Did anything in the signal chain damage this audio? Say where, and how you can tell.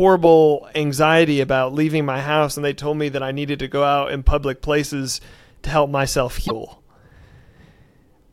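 Yes: damaged data in a compressed stream, from 6.44 to 6.51 s, just after "places to help myself". A 70 ms disturbance shows corrupted frames at the codec stage: the decoder lost sync and skipped ahead to the next valid frame header.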